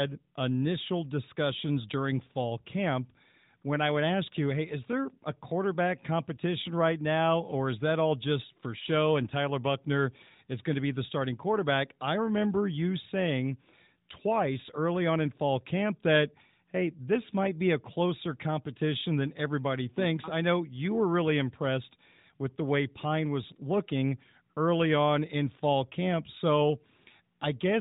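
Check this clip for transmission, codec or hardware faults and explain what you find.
No faults can be heard anywhere in this recording.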